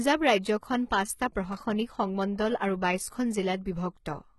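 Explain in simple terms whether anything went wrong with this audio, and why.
Throughout the speech, the s sounds and other hiss-like sounds come across gritty and metallic, and nothing is heard above about 11.8 kHz. This heavy damage likely comes from HE-AAC compression, which keeps only the lower sounds and fakes the treble by copying them upward.

From 1.52 to 1.61 s there is a short burst of crackle or scratching. That is loose connector crackle: a worn or dirty contact in the cable or plug briefly lost and regained its connection, chopping up the sound.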